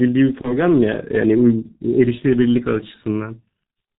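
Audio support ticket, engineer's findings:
Throughout: muffled, hoarse speech, nothing above 4 kHz, smeared consonants. G.723.1 codec, heavily degraded. Slow-updating vocal model and 30 ms frames blur transients. Coarse quality is consistent with the 6.3 kbit/s mode.

0.41 to 0.58 s: brief stretched sound, fading, then weak or distorted speech before recovery. VoIP packet loss concealed by the speech codec. The gap fits one lost 30 ms frame. The decoder extrapolated its last pitch and filter at falling gain, and the error carried into the following frames.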